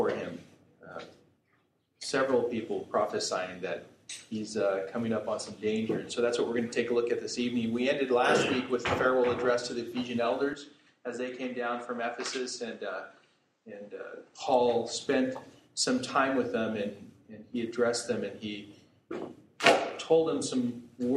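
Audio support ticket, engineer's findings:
Input switched to a poorer device, 10.53 s to 14.40 s. Sound abruptly duller and boxier, nothing above 9 kHz, level a few dB lower, new background noise floor roughly 40 dB under the signal. No gap at either switch; full band returns at 14.40 s. Likely the capture path moved to a secondary mic or headset profile with narrower bandwidth and its own gain and noise, then reverted.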